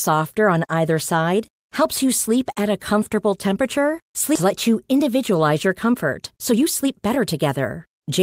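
A skip ahead at 4.35 to 4.46 s drops about a second of speech. That audio was dropped while later packets were already queued, so playback jumps forward and the two sides are joined with no gap.

Jitter buffer speed-up follows at 4.92 to 5.32 s at 109% speed, then at 5.91 to 8.19 s at 112%. Holding more audio than it aimed for, the buffer trimmed short pitch-period pieces repeatedly, about 40 ms and then about 300 ms, so speech sounds hurried at unchanged pitch.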